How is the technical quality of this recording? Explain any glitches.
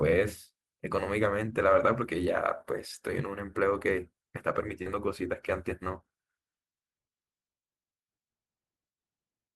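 The recording has one glitch: short concealed packet loss from 4.82 to 4.94 s. About 30 ms of the speech never arrived at the decoder in time, so the receiver covered the gap with roughly 33 ms of synthesized continuation, extending the preceding pitch, or shaped noise for unvoiced sound, before crossfading back into the real signal. It comes across as a brief smear or wobble, and a short consonant in that spot can disappear.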